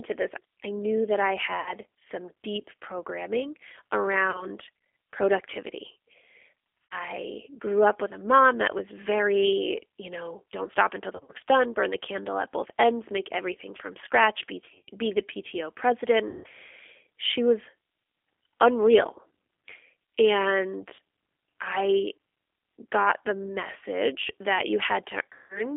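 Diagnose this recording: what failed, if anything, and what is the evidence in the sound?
The codec stage is the constant problem here. The whole thing is squeezed into a phone band of roughly 300 Hz to 3.5 kHz, with that rough, slightly synthetic edge you get from G.729, which fits the 8 kbit/s G.729A flavour. It rebuilds speech from a vocal tract filter, a pitch predictor and a few pulses per 5 ms subframe, so everything above the band is gone and the texture is plainly coded rather than natural.

On top of that, the network stage is dropping packets, and the decoder is papering over the gaps with VoIP packet loss concealment. You hear it at 1.6 to 1.77 s between "I knew that I" and "some deep programming", 4.31 to 4.5 s, 6.84 to 6.95 s, 11.13 to 11.37 s between "know don't stop until" and "done burn the candle", 14.66 to 14.9 s between "everything from scratch be" and "be the", 16.28 to 16.47 s, 20.95 to 21.0 s, and 25.33 to 25.67 s. 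Each one smears into a buzzy or noisy, fading stretch where the decoder keeps replaying its last pitch and filter at a falling gain. Because each frame builds on the one before, the sound stays weak for a bit even once packets are arriving again.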